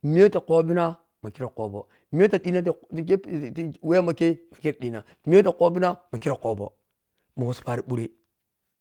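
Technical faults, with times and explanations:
2.39–2.45 s, 6.21–6.23 s and 7.91 s, lost packet rebuilt from error correction: at each point audio went missing, but a low-bitrate backup copy carried in the following packet was decoded in its place, so nothing drops out. The first spot covers about 40 ms, which fits two lost 20 ms packets, and the other two cover about 20 ms each. These patches sound rougher and noisier than the surrounding speech, because the backup copy is a low-bitrate version of the lost audio.
6.17–6.23 s, short concealed packet loss: about 40 ms of the call arrived too late to use. The receiver bridged roughly 35 ms of it by extending the preceding sound, continuing its pitch where it was voiced and using shaped noise where it was not, then merged into the backup-copy audio at 6.21 s. The result is a brief smear or wobble in the speech.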